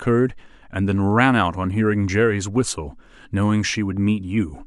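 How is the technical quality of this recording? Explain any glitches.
The recording has one recurring glitch. Clock slip clicks run from 0.21 to 4.50 s, about every fifth of a second, likely from two unsynchronised clocks around 150 ppm apart dropping or repeating single samples, heard as faint regular ticks.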